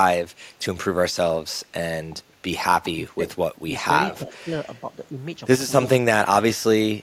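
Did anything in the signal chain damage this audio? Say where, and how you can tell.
Yes. Speech suppressed in double talk, likely the echo canceller ducking its own talker along with the echo, dips the sound at 3.03–3.26, 4.2–4.53, 5.97–6.07 and 6.25–6.43 s, by up to about 25 dB.

Echo leak, likely loudspeaker pickup the canceller missed, returns a 342 ms delayed copy at 4.1–4.44 s (about 20 dB down) and 5.83–5.88 s (about 10 dB down).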